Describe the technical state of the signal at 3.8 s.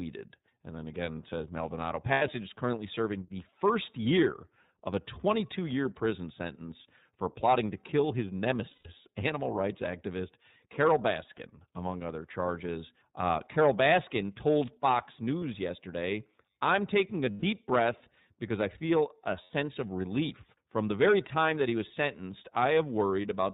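At 3.8 s you're hearing the iLBC codec, same as across the whole clip. Each 30 ms-ish frame gets coded on its own, which fits the 13.33 kbps mode, and nothing above 4 kHz survives, so the speech is dull, slightly rough and plainly synthetic.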